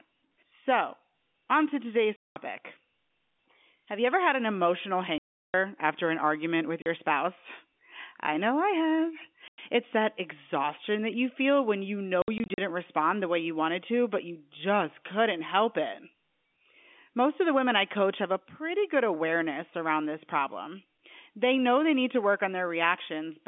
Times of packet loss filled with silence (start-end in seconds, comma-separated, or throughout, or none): 2.16-2.36, 5.18-5.54, 6.82-6.86, 9.48-9.58, 12.22-12.58